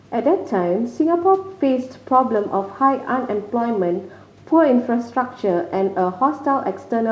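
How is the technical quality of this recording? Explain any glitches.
Nothing in this speech recording stood out as a glitch on listening; it carries the band-limited character of a G.722 call path, with nothing above 8 kHz.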